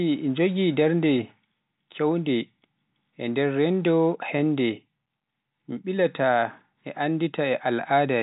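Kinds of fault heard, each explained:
No faults can be heard in this speech. It comes through G.711 telephone coding, so nothing above about 3.8 kHz reaches the ear and any coding damage is faint at most.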